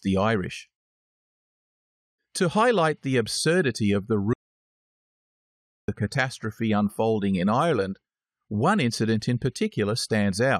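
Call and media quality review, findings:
Audio dropout to silence, 4.33–5.88 s: sound cuts mid-flow, about 1.55 s of silence, no room tone. Waveform flatlines; spectrogram shows a blank vertical band. Likely input loss (device disconnect, link failure or mute) while the encoder kept writing silence.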